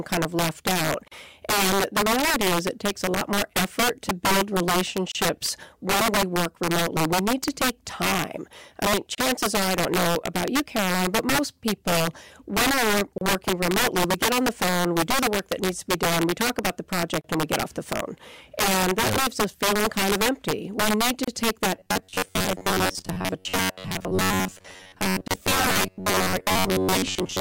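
Speech, with three separate problems stacked on it. Through the whole clip there's integer overflow: loud peaks are being pushed about 10 dB past full scale, and instead of being limited they wrap around to the opposite sign. Only a small slice of the samples, something like one in twenty, actually crosses the line, but each one jumps across the whole range, so the louder syllables get hit with harsh, violent cracks that are much nastier than ordinary clipping. Then there are seven short dropouts from a gap at a join of encoded pieces, landing every 4 s at 1.08, 5.12, 9.15, 13.18, 17.21, 21.24 and 25.28 s. The first is about 38 ms and the rest about 32 ms. You can hear one between "most people when we're" and "remotely we get on", another between "we talk about the" and "and we get off", and one right after "need to". Each is a clean hole with slightly smeared edges, and the speech picks up exactly where it left off. 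That points to separately encoded chunks butted together without trimming the encoder's leading delay and the padding on the final frame. Finally, from 21.75 s to the end the voice turns into robotic sound that's likely from repeated short buffers. Most of that stretch is made of recycled fragments, and the whole thing rides on a rigid, metallic buzz at about 94 Hz. That pitch fits the same roughly 10.7 ms chunk being looped while fresh audio arrives too slowly and gets skipped, though the buzz still loosely tracks the speech.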